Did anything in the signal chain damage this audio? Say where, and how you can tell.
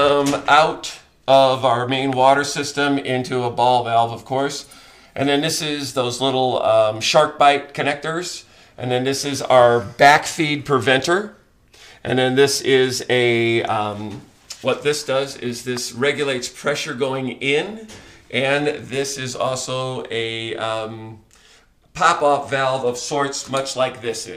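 Yes, there is hard clipping from 1.33 to 1.45 s. The signal was driven about 2 dB beyond what a converter, number format or other stage could pass, so its peaks were cut flat. The flattened tops add high harmonics, heard as crackle on those peaks.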